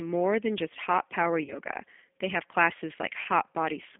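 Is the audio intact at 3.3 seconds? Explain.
No. At 3.3 s the speech is still recovering from VoIP packet loss concealed by the speech codec. About 20 ms went missing between 3.23 and 3.27 s, which fits a single lost packet. The decoder extended its last pitch and filter state with falling gain, producing a brief fill that fades. Because each frame builds on the previous one, the voice stays weak or distorted just past 3.27 s.

The whole clip also carries the G.729 codec at 8 kbit/s. It resynthesises speech from a vocal tract filter, a pitch predictor and sparse pulses, and the line band here is limited to roughly 250 Hz to 3.5 kHz. The result is muffled, plainly rough, synthetic-sounding speech at 3.3 s as well.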